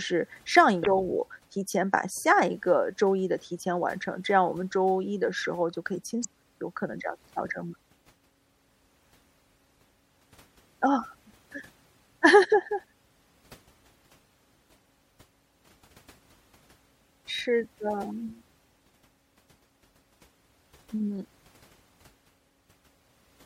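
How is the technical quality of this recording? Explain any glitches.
The technical quality is poor: the speech carries plainly audible codec damage throughout, and two short glitches interrupt it.

Across the whole clip the speech sounds watery and swirly, with a dulled top end and smeared consonant attacks. This is likely MP3 compression at a low bitrate, consistent with roughly 64 kbps, where the encoder cuts the treble and lets weak frequency lines flicker between frames.

From 0.83 to 0.88 s and from 6.21 to 6.25 s there are brief glitches, lasting about 53 ms and 43 ms. This is damaged data in a compressed stream: the decoder hit corrupted frames, lost sync and skipped ahead to the next valid frame header.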